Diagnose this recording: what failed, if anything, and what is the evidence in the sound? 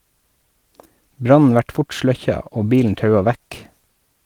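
Nothing failed in this recording, and the sound offers no evidence of a fault at any stage.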